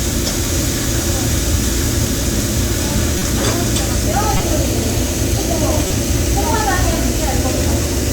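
Everyday sound, interrupted by three short bursts at 3.17–3.22 s, 4.35–4.40 s and 5.87–5.91 s, the last being the strongest. Each is a corrupt frame decoded: damaged compressed data played anyway, scattering energy at wrong frequencies for roughly one to a few frames.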